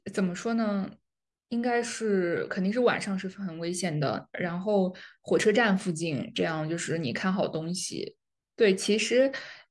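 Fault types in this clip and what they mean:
No fault types turn up in this clip, so there is nothing to list.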